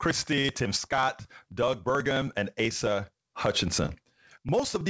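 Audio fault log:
0.06–4.89 s, periodic USB or driver dropouts: a background task stalls the audio driver every 54 ms, skipping a sliver of samples, heard as a steady ticking over the speech.
0.42–0.46 s and 3.86–3.90 s, short concealed packet loss: about 20 ms of audio arrived too late, and the receiver extrapolated over the gap, leaving a brief smear or wobble each time.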